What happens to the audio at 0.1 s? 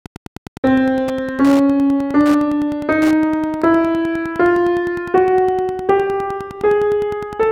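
Wi-Fi interference is present at 0.1 s and runs through the whole clip. A nearby Wi-Fi radio's transmissions are being picked up and rectified by the audio circuitry, so each beacon the radio sends, every 102.4 ms, turns into an audible click. At that moment the sound carries a steady ticking of almost ten per second, sitting roughly 20 dB below the wanted audio: quiet, but clearly regular and mechanical against the material.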